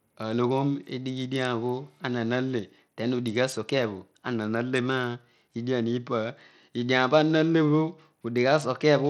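From start to finish the speech carries a gritty, grainy edge, and its upper frequencies sound thin and unsteady, flickering in and out instead of staying present. The damage is plainly audible throughout. This is likely Bluetooth SBC compression at a low bitrate, around 80 kbps. SBC splits the signal into a few broad bands and hands out bits without modelling hearing, so the weak top bands starve while coarse quantisation roughens everything else.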